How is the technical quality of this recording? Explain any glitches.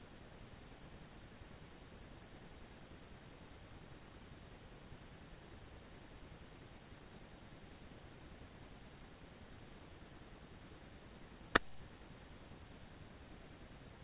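No glitches or technical faults can be heard here.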